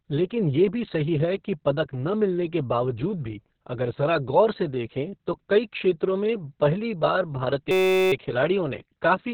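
The clip is speech carried throughout by Opus voice compression running in its SILK linear-prediction mode at a very low rate, which fits a bitrate of around 6 kbps with narrowband coding and 60 ms frames. At that rate the coder discards the upper band and quantises the excitation crudely, so nothing is heard above 4.4 kHz and the speech comes across muffled, hoarse and somewhat robotic, with heavy coding damage throughout. From 7.71 to 8.12 s a system hang loop takes over. The machine or its audio driver stalled while the sound hardware kept replaying the same tiny ring buffer, a 5.33 ms slice that fits a 256-sample buffer, repeated about 77 times. Because the loop is so short, it sounds like a steady buzz at about 188 Hz rather than a stutter. Little if any audio is lost once playback resumes.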